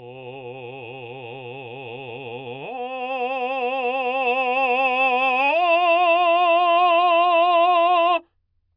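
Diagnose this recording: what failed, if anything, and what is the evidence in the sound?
Nothing failed in this music recording, and the sound gives no evidence of any fault.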